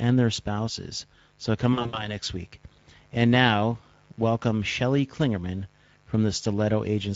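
A speech recording with three technical faults. A mains buzz runs under the whole clip. It is a steady, raspy hum built on 50 Hz, with harmonics climbing into the kilohertz range. It sits roughly 35 dB below the speech, so it is quiet but always there, clearest in pauses. The rasp comes from sharp current spikes twice per mains cycle, as from a dimmer, a rectifier or poor shielding. The Speex codec also colours the entire clip, and the damage is plainly audible. The speech sounds hoarse and grainy, with a noisy edge. Speex is a CELP codec. At this setting it has too few bits to code the excitation cleanly, so breathy noise replaces fine detail. The quality fits a bitrate around 16.8 kbps. From 1.73 to 2.17 s there is VoIP packet loss concealed by the speech codec. About 140 ms of audio is missing, scattered over roughly 200 ms, in gaps up to 60 ms long. That pattern suggests around seven lost frames. 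In each gap the decoder repeats its last pitch and filter at falling gain. The speech smears into a buzzy tone or coloured noise that fades. It stays weak and distorted briefly after the stream resumes.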